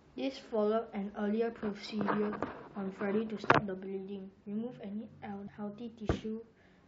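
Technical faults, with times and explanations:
Throughout, MP3 compression: a watery, swirly texture with dulled treble and smeared s sounds, likely from a low-bitrate encode around 64 kbps discarding weak frequency lines.
5.45 to 5.49 s, damaged data in a compressed stream: a brief glitch where the decoder misreads corrupted frames, loses sync, then resumes at the next frame header.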